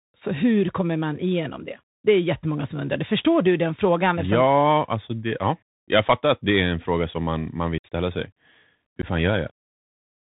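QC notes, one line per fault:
Throughout: Bluetooth CVSD headset codec. The speech is squeezed into the narrowband headset path, which fits a 64 kbps CVSD link. Nothing survives above 4 kHz, so s sounds turn scratchy and loud bright moments distort where the adaptive step size can't keep up. A fine granular hiss sits under everything. On a spectrogram there is a hard ceiling at 4 kHz with a noisy speckled floor. The waveform shows slightly stepped, grainy edges on loud peaks.
7.78–7.86 s and 9.02–9.05 s: unconcealed Bluetooth headset packet loss. Right after "som man man vill" about 60 ms of audio drops out, roughly fifteen short packets. Near 9.02 s a second, 15 ms hole covers a few packets. Nothing fills either gap, so the speech cuts off abruptly and returns briefly quieter as the CVSD step size rebuilds. A spectrogram shows thin vertical blank columns, and the waveform shows flat gaps with sharp boundaries.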